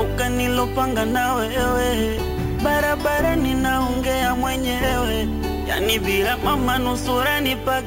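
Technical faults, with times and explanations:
Throughout, imaging from sample-and-hold upsampling: unsmoothed repeated samples mirror the spectrum into 8 to 16 kHz, a metallic fizz about 18 dB down, pointing to 16 kHz source audio.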